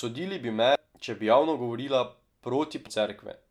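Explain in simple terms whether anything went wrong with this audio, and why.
Two brief glitches interrupt the speech, both caused by damaged data in a compressed stream. The first runs from 0.75 to 0.78 s, between "bi me" and "če bi javno govorila"; the second from 2.86 to 2.90 s. Part of the stored file was corrupted, so the player briefly loses its place and jumps ahead to the next good chunk. Each one is heard as a short chirp, squawk, click or gap.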